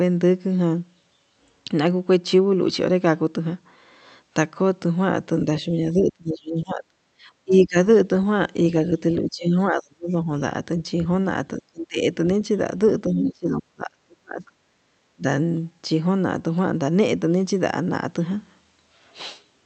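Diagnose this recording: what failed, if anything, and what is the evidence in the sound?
Call processing is the stage here. The speech ducks hard, by roughly 25 to 35 dB, at 5.72–6.84, 7.44–7.77, 9.22–10.3, 11.6–11.99 and 13.07–15.24 s. That pattern is likely speech suppressed in double talk: the echo canceller couldn't tell the talker from loudspeaker echo and pulled both down.

There's also background gated by the echo canceller, a brief 40 ms hole from 7.12 to 7.16 s. The room sound drops by about 19 dB and snaps back, which is the canceller clamping the mic while the far end plays and then releasing.

Around 13.22–13.29 s, a short scrap of the other side's voice leaks through, sitting only a few dB under the talker. It's likely residual loudspeaker echo the canceller failed to subtract, right inside that long suppression stretch.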